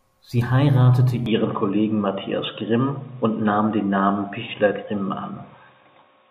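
Input likely switched to a poorer device at 1.26 s: speech suddenly dulls, losing everything above 3.8 kHz, gapless, with a faint new noise floor.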